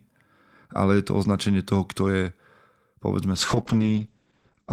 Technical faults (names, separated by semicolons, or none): call bitrate drop